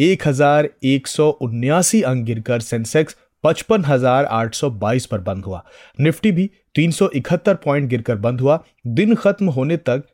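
No technical faults can be heard anywhere in the speech. There is no point in the recording that calls for a time mark or a fault description.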